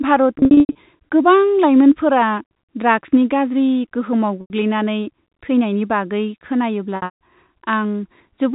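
Packet loss with pitch repetition occurs three times. From 0.39 to 0.75 s, about 240 ms is lost in scattered gaps, the longest 90 ms. From 4.41 to 4.50 s, one 90 ms gap follows. From 6.96 to 7.18 s, about 210 ms drops out, including a 150 ms run. The receiver fills each gap by repeating the last pitch period. Short gaps sound like a held, buzzy tone. The 150 ms run fades to silence before the sound cross-fades back. Underneath, the G.711 telephone coding is limited to the 4 kHz band.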